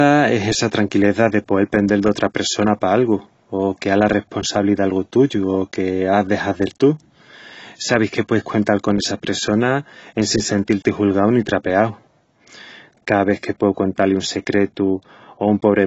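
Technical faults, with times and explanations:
Throughout, AAC compression: dull, smeared speech with a warbling, fizzy texture and nothing above 7.9 kHz, likely from heavy quantisation at a low bitrate.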